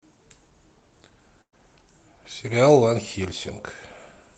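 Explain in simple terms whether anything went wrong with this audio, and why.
At 1.41 to 1.54 s there's a burst of packet loss. The call lost a chunk, covered it with a fading smear, and skipped about 120 ms.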